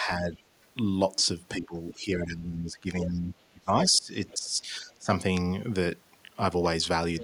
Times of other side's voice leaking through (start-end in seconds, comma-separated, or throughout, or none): 4.29-4.38, 7.19-7.23